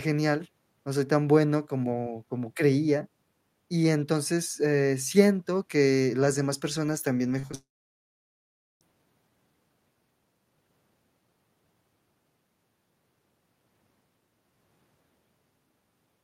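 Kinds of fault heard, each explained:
Short concealed packet loss: Small pieces of the stream arrived too late to decode. The receiver patched each gap by extending the preceding sound. Three patches cluster between 7.39 and 7.55 s, covering 40, 20 and 20 ms. They come across as a quick smear.
Long network dropout: Right after those patches, the sound cuts out from 7.55 to 8.83 s. A brief fading continuation gives way to about 1.15 s of silence. Audio likely stopped arriving, so that stretch is lost before the sound resumes.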